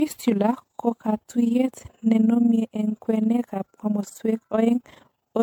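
Throughout the speech, overlap-add ripple makes the level swing by about 11 dB roughly twenty times a second. The frames were recombined with an overlap that does not sum to constant gain, so each frame boundary dips and swells, giving a rough, fast flutter.

Also present from start to finish is generation loss. The sound is swirly, smeared and hollow, with blurred attacks, even though content still reaches about 20.1 kHz. The likely cause is repeated re-encoding, perhaps seven or so passes, consistent with 96 kbit/s MP3. Each pass adds fresh quantisation noise and spectral holes on a shifted frame grid.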